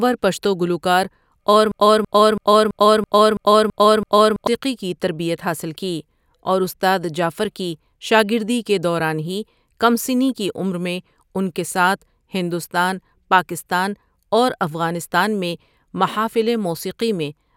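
From 1.72 s to 4.47 s the speech falls into a broken-record loop. A fragment about 0.33 s long plays eight times back to back, identical on every pass, before the audio resumes with "کی تربیت حاصل". The likely cause is a player or stream that stalled and kept resending the last chunk it held, so the speech from that stretch is lost. Unlike an echo, the repeats neither fade nor overlap. Unlike a dropout, the gap is filled rather than silent.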